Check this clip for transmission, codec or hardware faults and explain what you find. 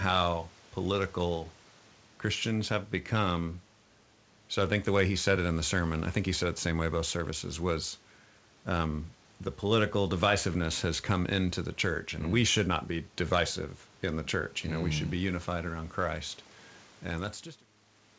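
Nothing here points to a transmission, codec or hardware problem; the speech carries quiet room noise about 33 dB below it, the top end stops at 8 kHz as you'd expect from a wideband call codec such as G.722, and the level eases out gently from roughly 17 s to 17.7 s.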